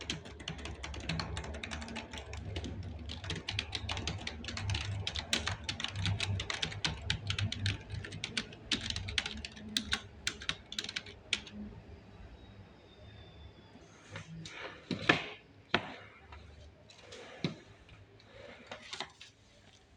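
No technical faults can be heard anywhere in this recording.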